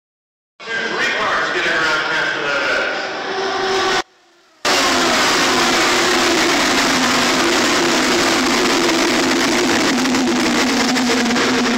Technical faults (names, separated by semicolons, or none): audio dropout to a faint residue